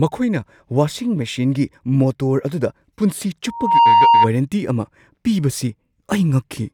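A speech recording with loudspeaker feedback squeal from 3.47 to 4.30 s: a microphone-to-speaker loop rings at 929 Hz, swelling over roughly a third of a second to about 10 dB above the speech. A spectrogram shows one bright horizontal line; the waveform balloons.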